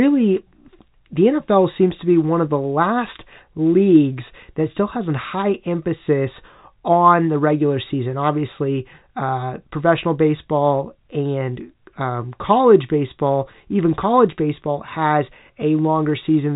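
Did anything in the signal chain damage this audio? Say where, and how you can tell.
No, the speech has the band-limited character of G.711 telephone coding, with nothing above about 3.8 kHz, and no stage in the chain shows audible damage beyond what that format itself imposes.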